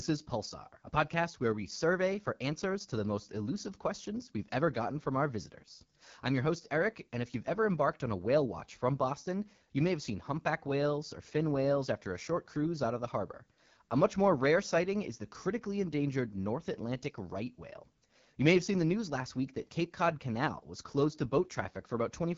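This is speech passed through the AMR wideband (HD Voice) codec for its whole length. It sounds plainly rough and raspy, which fits one of the codec's lowest rates, around 8.85 kbit/s. Nothing reaches above about 7.2 kHz, and the top band is synthetic noise.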